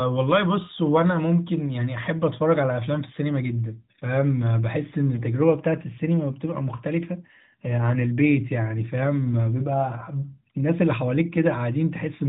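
From 5.15 to 5.23 s, AMR bit errors hit the narrowband speech. A few percent of the weakly protected bits arrived flipped. The excitation pulses and fine pitch and gain values went wrong. Level and pitch hold, but the sound turns briefly hoarse and gargly.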